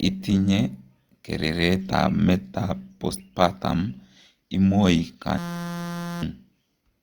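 From 5.38 s to 6.22 s the speech gives way to a system hang loop. The machine stalled, and the sound hardware kept replaying one 5.8 ms slice of audio, which fits a 256-sample buffer, well over a hundred times. Such a short loop sounds like a steady, pitched buzz at 172 Hz, not a stutter. Unlike a dropout, it never goes silent, and the speech resumes with about a second missing.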